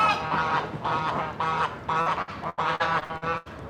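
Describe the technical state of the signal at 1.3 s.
Nothing at 1.3 s points to a technical fault; the signal is intact at that moment.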